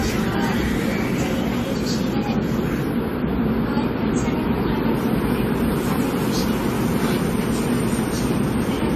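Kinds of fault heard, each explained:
Generation loss: The whole clip sounds swirly, smeared and hollow, and sharp attacks are blurred rather than crisp. Nothing is heard above 14.2 kHz. The damage is heavier than a single lossy encode would leave, which fits repeated decoding and re-encoding at around 64 kbit/s in an AAC-style codec, likely about seven times over. Each pass quantises on a shifted frame grid, so noise and spectral holes keep piling up.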